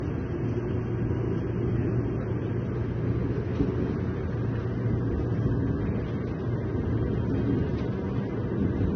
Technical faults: transcoding between lossy codecs

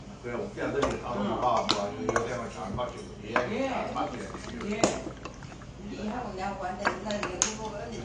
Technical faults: AAC compression

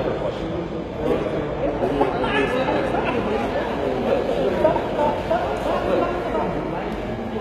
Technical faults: HE-AAC compression; drift correction step

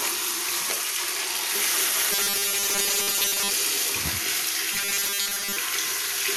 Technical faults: robotic sound from repeated short buffers

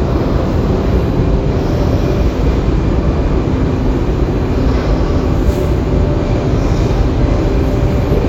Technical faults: none

